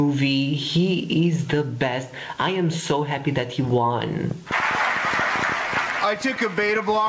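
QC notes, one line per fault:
Throughout, gain pumping: the input gain was likely set far too high, so a fast limiter or compressor pulls the level down on each loud sound, swinging it by around 15 dB. Loud and soft parts end up closer together, and the sound is squashed.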